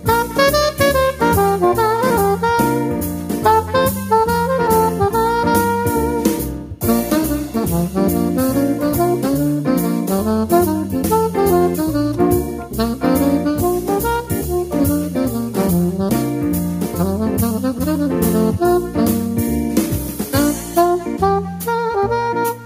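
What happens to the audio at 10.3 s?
Nothing goes wrong at 10.3 s; the audio plays through that moment intact, with no dropout, glitch or other fault.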